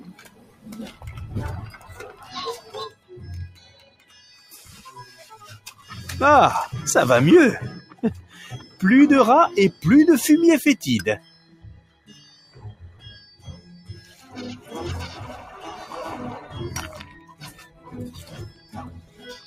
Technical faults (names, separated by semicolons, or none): noise suppressor applied to music or sounds; sound cut by the noise suppressor